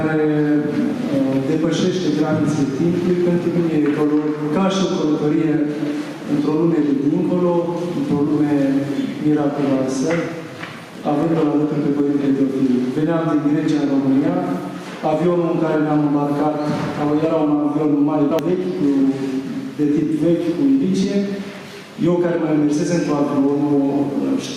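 The audio shows gain pumping from start to finish. The swing is around 10 dB. Loud and quiet passages sit unnaturally close in level, so the whole recording sounds squashed and breathing. The likely cause is input gain set far too high for the microphone, with a fast limiter or compressor clamping down on each loud sound and releasing in the pauses.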